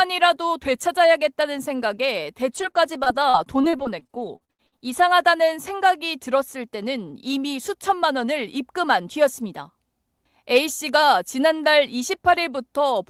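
From 2.57 to 5.00 s, repeated packet loss (robotic sound) sets in: the stream keeps dropping or delaying packets, well over a dozen times in under two and a half seconds, with the longest hole lasting 77 ms. Each hole is bridged by stretching the last received sound, so around half a second is rebuilt this way, about a fifth of the stretch. The result is a choppy, robotic texture with small pieces of the sound missing.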